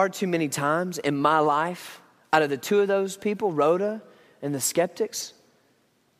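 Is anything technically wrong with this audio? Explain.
No, nothing technically wrong can be heard in this speech recording. There is no fault to point to at any moment in it.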